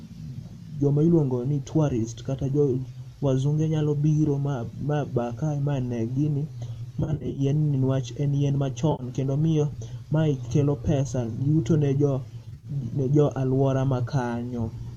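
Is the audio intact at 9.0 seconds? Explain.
No, AAC frame loss with concealment occurs from 8.92 to 9.03 s: the decoder patches roughly 70 ms of missing frames from earlier spectrum, leaving a brief smeared, noisy patch.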